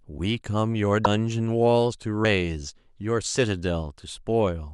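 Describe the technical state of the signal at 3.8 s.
At 3.8 s the speech signal is intact, with no technical fault present at that moment.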